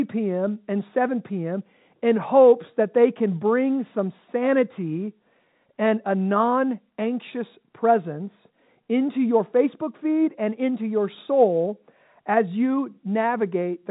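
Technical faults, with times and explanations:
Nothing stood out on listening; the speech comes across with the narrow, telephone-band sound of G.711 A-law coding, with nothing above about 3.8 kHz.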